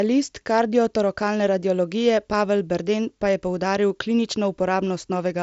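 No technical faults can be heard in this speech recording.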